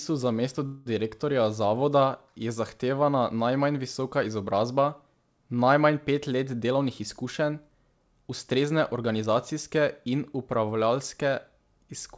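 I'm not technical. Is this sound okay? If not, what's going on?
No. Right after "za mesto", from 0.66 to 0.88 s, there's a call audio freeze: the incoming data was likely held up on the network and the receiver ran out of sound to play. It stretched the last sound into a brief fading buzz or hiss, so nothing is lost, but a gap of about 0.2 s is inserted.

From 6.64 to 9.81 s there's a jitter buffer speed-up: the receiver had stored more audio than it wanted and trimmed tiny slices out to catch up. This stretch plays about 6% faster at the same pitch, sounding slightly hurried, with roughly a fifth of a second removed.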